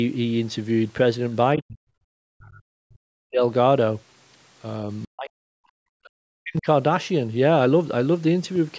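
Speech clip in which the talker is pulled down by about 40 dB at 1.56–1.81 s, 2.07–3.42 s and 5.05–6.67 s. The likely cause is speech suppressed in double talk, where the echo canceller treated overlapping speech as echo and attenuated it.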